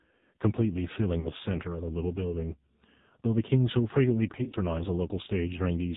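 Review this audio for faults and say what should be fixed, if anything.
AMR narrowband mobile codec, throughout: heavy damage gives buzzy, synthetic speech, which fits a low AMR-NB mode near 5.9 kbps. A spectrogram shows nothing above 4 kHz. Use a wideband codec or a higher bitrate.

Lost AMR speech frames, 1.20 to 1.28 s: about 40 ms is concealed by repeating the previous pitch and vocal tract settings at falling gain. This heard as a brief warbly dip, with a smeared, sagging envelope on the waveform. Stronger radio error protection or a better link would prevent it.

Lost AMR speech frames, 4.32 to 4.55 s: scattered losses over about 200 ms, runs up to 40 ms. This gives repeated drawn-out stumbles, with patchy low-energy smears on the spectrogram. Improve channel quality or error protection on the radio link.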